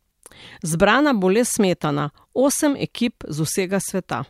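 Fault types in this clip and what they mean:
There are no fault types to list for this clip.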